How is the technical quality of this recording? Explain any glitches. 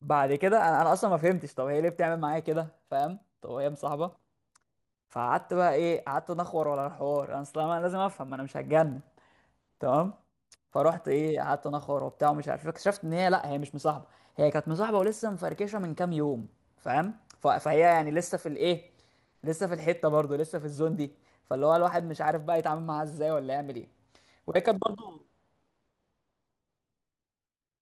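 The recording has one persistent glitch. Throughout the speech, the resampler restarted on every block: each 40 ms block was rate-converted in isolation, apparently from 24 kHz to 48 kHz, so its edges lacked true neighbouring samples. The resulting small edge errors repeat at 25 Hz, a rough buzz that rides along only while speech is present.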